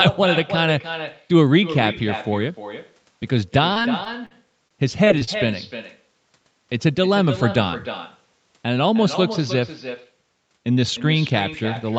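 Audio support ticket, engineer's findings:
Echo with no canceller, whole clip. Quieter, thinner copy of the speech trailing each phrase by around 300 ms, about 11 dB down. Far-end loudspeaker feeding its own mic, no AEC removing it. Fixed lag and steady level across the clip separate it from room reverb, which smears continuously rather than repeating the phrase.

Repeated packet loss (robotic sound), 3.73–4.34 s and 4.68–5.36 s. Choppy bursts: six short dropouts in the first stretch, five in the second, longest about 47 ms and 28 ms. Lost or late packets, each hole patched by stretching the previous sound, with the next hole following soon after. Confined to these two spans, not clip-wide, so it is a network or jitter-buffer problem rather than codec coloration. The 8 kHz band limit on the Opus path is present throughout and plays no part in it.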